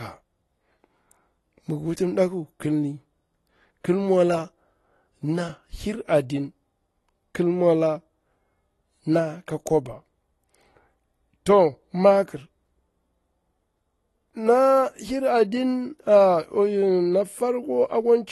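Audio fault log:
Throughout, AAC compression: nothing comes through above about 12.1 kHz, so the speech sounds dull and smeared, with a fizzy, warbly edge on sibilants. That's likely a low-bitrate AAC-LC encode, and the damage fits something around 32 kbps.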